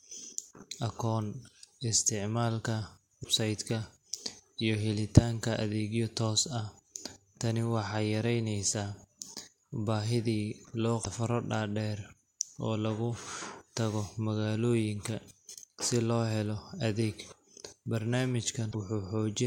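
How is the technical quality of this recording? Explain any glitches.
The speech is marred by three brief glitches. Each is damaged data in a compressed stream, at 3.20 to 3.26 s, 11.01 to 11.07 s and 18.69 to 18.75 s. Corrupted bytes make the decoder lose frame sync, giving a short chirp or squawk.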